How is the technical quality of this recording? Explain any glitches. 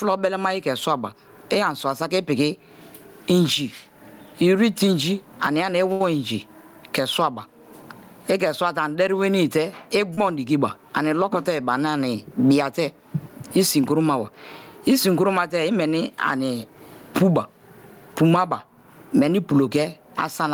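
The recording has audible problems: constant gain pumping throughout, plus two brief network glitches.

Gain pumping runs through the whole clip, with a level swing of roughly 25 dB. The likely cause is a microphone gain set far too high, with a fast limiter or compressor clamping down on every peak. Loud and quiet passages are squashed toward one level. Unlike a slow automatic level drift, the breathing follows each individual loud sound.

At 5.92 to 6.01 s there is a short stall from a late packet. A packet arrived late, the jitter buffer ran dry, and the receiver held the last sound for about 78 ms until data caught up. Playback then resumed from the same point, so nothing is lost. You hear one sound stretched unnaturally long, with a slight buzz or dip, rather than a gap or a cut.

At 10.14 to 10.18 s there is a short concealed packet loss. About 30 ms of audio never reached the decoder in time, and the receiver patched the hole with roughly 28 ms of extrapolated sound before blending back into real audio. 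It comes across as a brief smear or wobble. Unlike the stall, this is a replacement rather than a delay, so the original sound at that moment is genuinely gone.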